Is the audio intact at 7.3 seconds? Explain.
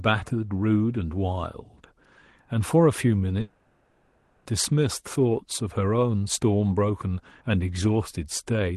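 Yes, the audio is intact at 7.3 seconds, with no fault at that moment.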